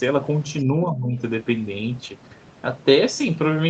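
A short speech recording in which, from 0.59 to 0.64 s, a very faint second voice slips in underneath, far below the main talker, a brief scrap of the other side's voice leaking through. This is likely residual loudspeaker echo that the call's echo canceller failed to fully remove from the microphone signal. Right after, from 0.64 to 1.19 s, the talker's own voice sinks and breaks up, dipping by roughly 20 dB at its worst, with about four tenths of a second affected in total. That points to speech suppressed in double talk: with both sides talking at once, the echo canceller likely couldn't tell the near talker from the echo and turned everything down together. The audio tops out at 8 kHz, consistent with an Opus call path running in wideband mode.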